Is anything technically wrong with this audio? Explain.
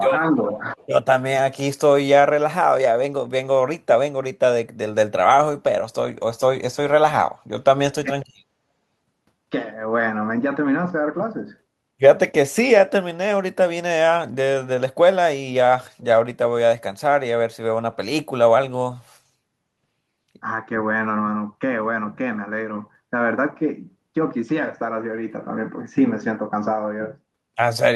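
Yes. The likely cause of the first problem is an echo canceller that lost track during double talk, failed to separate this talker from the far end's loudspeaker, and pulled both down. This is speech suppressed in double talk. From 0.33 to 0.63 s the voice dips by roughly 5 dB in brief patches, and at 8.03 to 8.1 s it sinks more sharply, by roughly 15 dB.

There is also an echo leak from 0.77 to 0.86 s. The far end's canceller likely left part of its microphone pickup in place and sent it back. The result is a faint copy of the voice about 405 ms late, roughly 35 dB below the speech.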